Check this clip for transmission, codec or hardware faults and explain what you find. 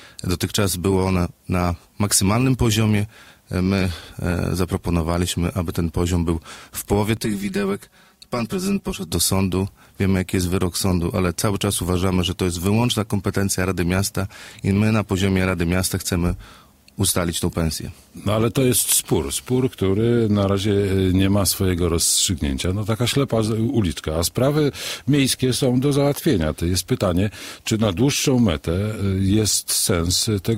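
One fault is present. From 7.17 to 9.11 s there is channel delay (comb filtering). One channel lags the other by about 5 ms, and the two are summed to mono. Shared content cancels at evenly spaced frequencies, starting around 100 Hz. The sound turns hollow and phasey.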